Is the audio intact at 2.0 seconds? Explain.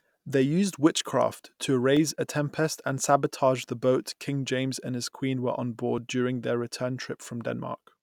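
No. Just before 2.0 s, at 1.97 s, between "used witchcraft to" and "a tempest and sabotage", there is a single sharp tick. It is a block of digital silence about 1.3 ms long, consistent with a 64-sample buffer left unfilled and output as zeros, with abrupt edges that click.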